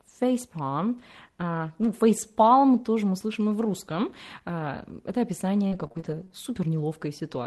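Repeated packet loss (robotic sound) from 5.67 to 6.32 s: short dropouts, the longest 36 ms, are patched by extending the preceding sound, leaving choppy speech.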